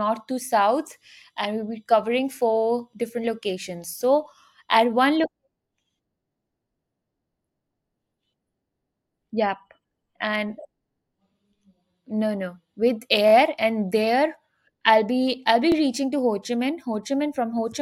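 Repeated buffer at 13.28 s, just before "and there I'll be", and at 15.72 s, between "I'll be I'll be" and "reaching to". Fresh audio arrived late, so a 23 ms block, which fits a 1024-sample buffer, replays twice and then once, giving brief hard-edged stutters.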